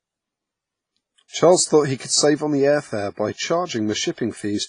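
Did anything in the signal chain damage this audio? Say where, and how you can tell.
Yes. The damage is at the codec stage, and the likely cause is WMA compression. The whole clip has a hard ceiling with nothing above 10.5 kHz, and the speech carries a ringing, washy texture with hiss that rises and falls with the signal. That heavy damage is consistent with a low bitrate around 24 kbps. At that rate the transform coder zeroes weaker spectral lines and spreads coarse quantisation noise across each long block.

Pre-echo from the same codec appears before four sharp attacks: 1.28 to 1.33 s, 1.97 to 2.00 s, 3.33 to 3.38 s, and 4.12 to 4.18 s. Each onset is preceded by a brief hiss lasting 35 to 58 ms, and the attack itself sounds softened. The attack lands late in a transform block, so noise sized for the loud portion is spread evenly over the block and fills the quiet gap before it.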